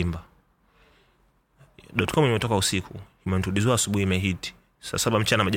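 From 2.08 to 2.16 s, a loud pop: two sharp thumps about 10 dB above the speech, likely a voltage pulse entering the signal chain.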